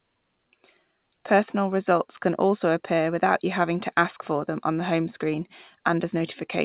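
Listening to this speech clip, nothing stood out as a technical fault.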